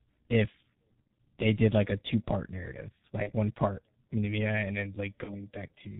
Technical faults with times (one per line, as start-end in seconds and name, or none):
0.00-6.00 G.723.1 codec
1.07 VoIP packet loss concealed by the speech codec
3.23-3.31 VoIP packet loss concealed by the speech codec
5.24-5.32 VoIP packet loss concealed by the speech codec